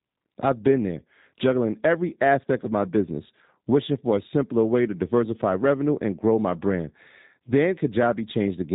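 From start to finish the speech sounds slightly rough and synthetic, with nothing above 4 kHz, the plainly audible signature of the G.729 codec, consistent with its 8 kbit/s rate. Each 10 ms frame is rebuilt from a vocal tract filter, a pitch predictor and a few pulses.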